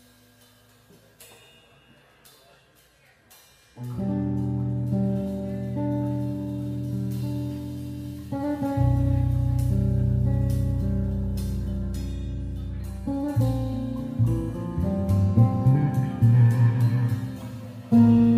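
No technical faults can be heard in the recording, so there are none to describe in time order.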